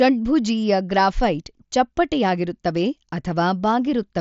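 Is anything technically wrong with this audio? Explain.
No, this is speech carried over a Bluetooth mSBC headset link working as designed: the band stops at about 7.7 kHz and loud syllables carry only the light graininess that wideband headset codec always leaves.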